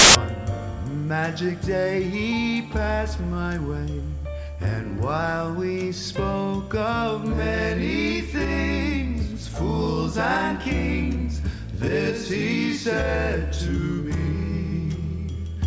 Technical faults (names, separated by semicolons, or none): file tags played as audio